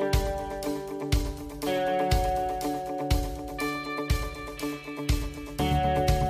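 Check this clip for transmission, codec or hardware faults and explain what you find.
Nothing stood out on listening to this clip.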